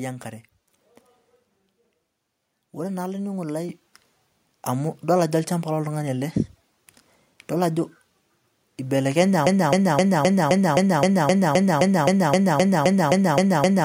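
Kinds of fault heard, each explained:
Microphone volume stepped up: Right after "ore naa olaininingoni lai", at 3.69 s, the speech and the background jump together by about 7 dB and stay louder. This is call software raising the microphone's input volume in one step after judging it too quiet.
Broken-record loop: From 9.47 s to the end, one 0.26 s fragment repeats back to back, seventeen times, and the rest of the speech never arrives. The likely cause is a player, encoder or stream that stalled and kept resending the last piece it held.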